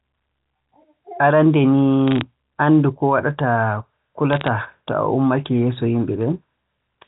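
At 2.08–2.21 s and 4.33–4.48 s, bit errors on a digital phone line crackle as flipped bits spike single samples, leaving waveform needles and thin vertical spectrogram lines.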